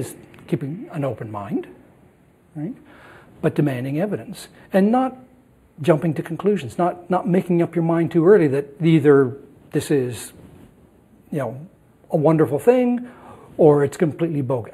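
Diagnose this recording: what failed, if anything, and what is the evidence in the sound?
Channel delay (comb filtering) runs throughout: the sound is hollow and phasey, with fixed notches, the first near 5 kHz. One channel trails the other by about a tenth of a millisecond, which fits a few-sample offset at the converter or driver stage. Summing to mono cancels evenly spaced frequencies.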